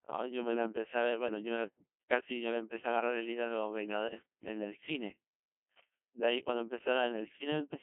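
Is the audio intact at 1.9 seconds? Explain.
No. At 1.9 seconds the speech is passing through the Codec 2 vocoder, as it does for the whole clip. The coder keeps only pitch, voicing, energy and a coarse spectral envelope. The decoder then rebuilds the voice from sine waves, so the original waveform is gone. The damage is heavy and fits a rate around 1.2 kbit/s. The voice sounds robotic and buzzy. It sits in a narrow 200 to 3400 Hz line band, with nothing above 3.6 kHz.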